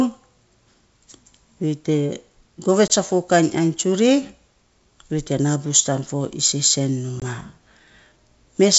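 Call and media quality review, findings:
Packet loss on an ADPCM call, 2.88–2.90 s: a hard-edged hole of about 20 ms, consistent with a single dropped packet. Speech comes back slightly distorted while the decoder's predictor and step size re-sync with the sender.

Same again at 7.20–7.22 s: another roughly 20 ms gap filled with silence, then a short distorted re-entry before the adaptive state settles. The wideband path underneath sounds like full-rate G.722, clear up to 7 kHz.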